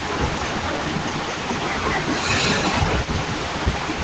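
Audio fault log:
throughout: speech suppressed in double talk. The speech dips by a few decibels at most, likely the echo canceller ducking the talker along with the far-end echo.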